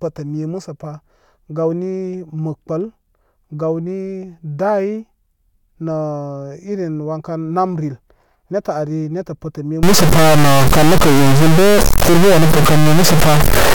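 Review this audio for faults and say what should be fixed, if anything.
A stuck bit, likely a high-order data line held fixed, runs from 9.83 s to the end, adding a step of roughly -5 dBFS: harsh, buzzy distortion with loud noise filling pauses. Checking converter wiring and running bit-pattern tests on the data path would catch this before recording.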